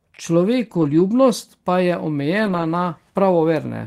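From 0.65 to 0.99 s and again from 2.45 to 2.63 s, lost packets were rebuilt from error correction: low-bitrate redundant copies fill the gaps, sounding rougher and noisier.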